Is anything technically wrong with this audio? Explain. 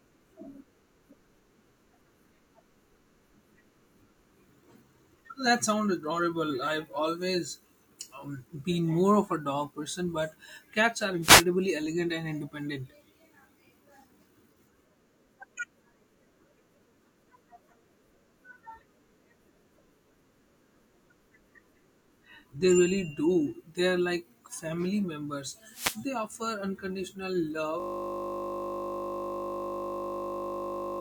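Yes, the speech has two kinds of fault.

A wireless microphone noise hit occurs from 11.21 to 11.45 s and again from 25.70 to 26.01 s. The analogue FM radio link fades briefly when reflected signals cancel the direct one, and the receiver's own noise rises as the carrier weakens. Each fade is heard as a short swish of static, about a quarter to a third of a second long, laid over the speech.

A system hang loop begins at 27.80 s and continues to the end of the clip. The computer or audio driver stopped supplying new audio while the sound hardware kept replaying the same ring buffer. A 20 ms piece of sound repeats exactly, 50 times a second, so the speech is replaced by a steady 50 Hz buzz that lasts for the final three seconds or so.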